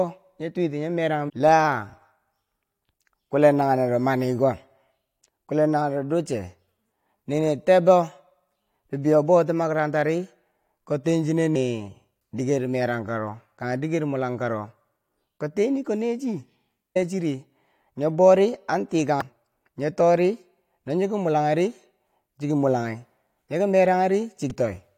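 Short bursts of damaged data in a compressed stream interrupt the speech five times. The first runs from 1.28 to 1.30 s. The others fall at 11.54, 16.95, 19.21 and 24.50 s. Each is a brief chirp or blip that cuts through the speech. At these points the coded data is corrupt. The decoder misreads those frames and loses its place in the stream. It then hunts for the next valid frame header and resumes.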